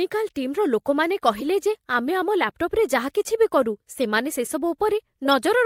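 At 1.35 to 1.42 s, a corrupt frame was decoded: damaged bits in a few compressed frames misplaced spectral energy, producing a brief glitch peaking around -15 dBFS.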